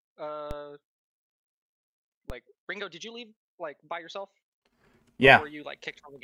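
At 0.51 s, 2.30 s and 5.27 s the waveform's zero line jumps abruptly, a DC step of about -24 dBFS each time, as if an offset were suddenly switched into the signal path. Each jump is heard as a brief low thump while the sound itself carries on unchanged. The offset does not hold. It drains away as a 20 Hz high-pass pulls the baseline back. On the waveform the trace jumps sharply off centre and then drifts back toward it. A spectrogram shows a brief broadband vertical smear, strongest at the bottom.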